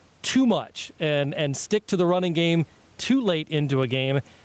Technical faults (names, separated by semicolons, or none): gain pumping